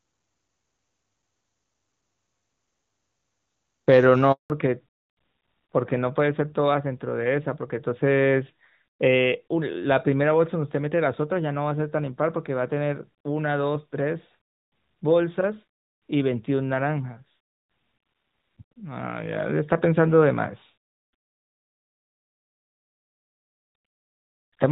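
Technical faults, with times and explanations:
4.32 to 4.50 s, handover gap: the speech fades out within a few tens of milliseconds and stays silent for about 180 ms while the call is passed from one network to another and no speech frames arrive. Packet loss would usually be covered by smeared, buzzy concealment. Here there is clean silence, and the sound that follows has a different bandwidth, which points to a change of link.
4.50 s to the end, fallback to narrowband: from the moment the new link starts, nothing above 4 kHz remains, so sibilants lose their hiss and the speech turns duller and rougher. Before the gap the audio was full HD Voice, clear up to about 7 kHz, which fits AMR-WB at its top rate. The change is a sudden, permanent step to a narrowband codec rather than the rasp of wideband running at a low rate.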